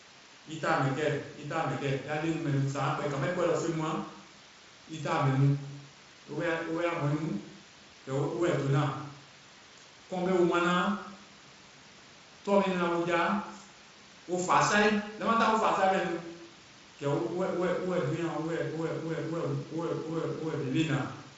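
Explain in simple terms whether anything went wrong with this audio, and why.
Nothing went wrong with this speech recording: it passes through the Speex voice-chat codec as intended, leaving at most faint traces of compression and a sound that naturally stops at around 7.6 kHz, which is normal for this kind of coding.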